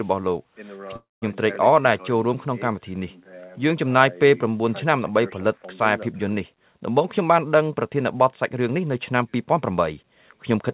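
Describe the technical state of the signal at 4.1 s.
At 4.1 s the audio is intact, with only the steady band limit of the call path, which has nothing above 4 kHz and fits a narrowband telephone codec such as G.711 mu-law.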